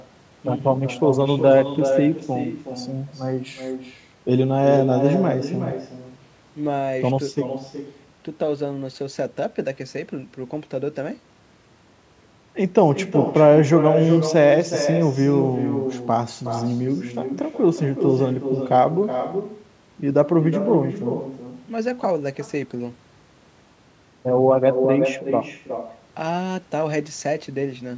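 Throughout, every phrase returns as a quieter, thinner copy roughly 0.4 s later and about 8 dB down: echo with no canceller, the far end's loudspeaker feeding its microphone back into the call. Unlike room reverberation, it arrives as a distinct delayed repeat rather than a smeared tail.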